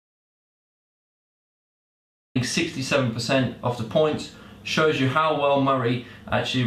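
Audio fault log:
0.00 to 2.35 s, audio dropout to silence: the clip opens in silence, with no room tone or noise floor at all, and sound only arrives at 2.35 s, cutting in abruptly mid-flow rather than fading up. The gap was already under way when the clip begins, so whatever was said or played during it is lost. The input was likely lost through a disconnected device, a failed link or a mute, while the recorder kept writing silence.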